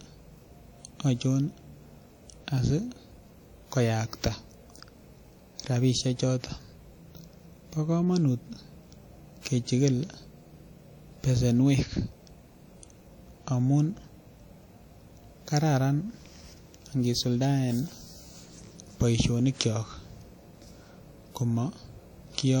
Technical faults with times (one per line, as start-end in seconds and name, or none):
0.00-22.60 WMA compression